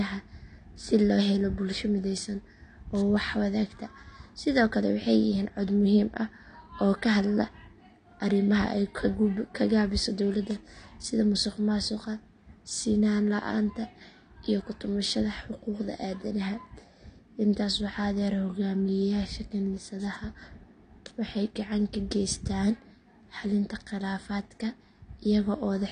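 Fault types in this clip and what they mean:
AAC compression: the speech sounds dull and smeared for its whole length, with nothing above 9.6 kHz and a warbling, fizzy texture on sibilants and held sounds. The codec quantised the spectrum coarsely, which likely fits AAC-LC at around 32 kbps.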